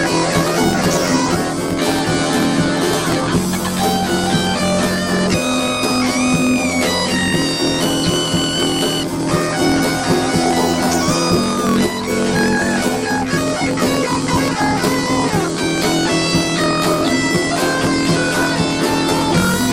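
Planar audio read as interleaved runs throughout the clip. Each block stores its left samples and then its right samples, but playback treats them as alternating left-right pairs, so every block plays twice at double speed: first its left half, then its right. The blocks last about 23.22 ms, which fits a 1024-sample block. The sound comes out an octave high, with a flutter at the 43.1 Hz block rate, while the overall pace stays correct.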